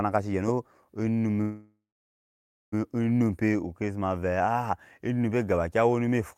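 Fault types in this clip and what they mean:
call audio freeze: At 1.41 s the speech holds its last sound as a fading buzz, then 0.94 s of silence. It resumes with nothing lost, 1.31 s late, likely because delayed packets emptied the jitter buffer. The spectrogram shows smeared flat bands, then a blank gap.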